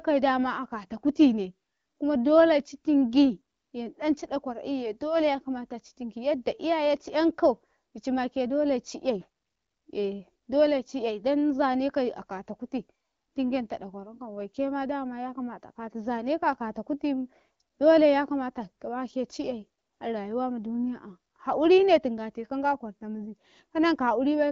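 The clip is speech, and nothing is technically wrong with it.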